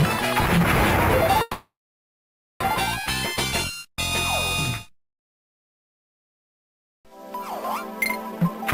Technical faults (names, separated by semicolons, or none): call audio freeze; jitter buffer speed-up